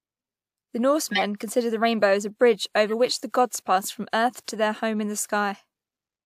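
From 1.11 to 1.22 s, just before "considered the rainbow as", a corrupt frame decoded gives a loud, harsh burst peaking around -5 dBFS. Damaged bits, across a couple of frames, put energy at the wrong frequencies. At 2.88 to 2.91 s, between "rainbow as a bridge" and "which the gods passed", a single bad frame makes a much quieter blip.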